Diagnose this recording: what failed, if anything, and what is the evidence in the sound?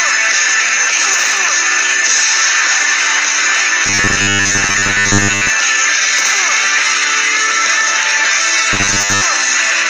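Robotic sound from repeated short buffers at 3.86–5.50 s and 8.73–9.22 s: a rigid 100 Hz buzz, likely the buffer stage looping 10 ms blocks. Mains hum would persist throughout.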